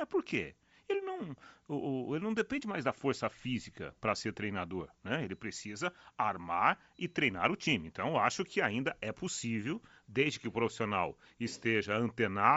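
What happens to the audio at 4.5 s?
At 4.5 s, as across the whole clip, the speech has a breathy, grainy edge. This is likely Bluetooth LC3 compression, which fits a 32 kbps stream. Its upper spectrum is zeroed and refilled with noise rather than cut cleanly, as a plain lowpass would do.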